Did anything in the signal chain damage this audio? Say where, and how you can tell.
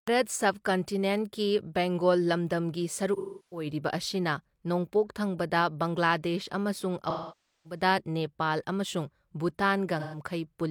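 Yes. The damage is at the codec, from AAC frame loss with concealment. Smeared, noisy patches appear at 3.16 to 3.66 s, 7.09 to 7.81 s and 9.99 to 10.21 s. Frames went missing, and the decoder rebuilt each gap from the last good spectrum.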